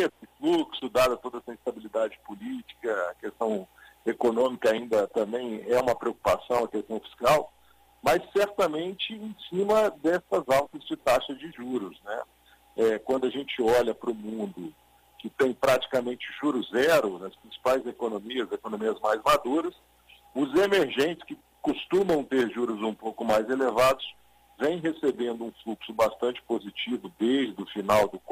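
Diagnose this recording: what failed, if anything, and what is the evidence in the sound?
No faults can be heard.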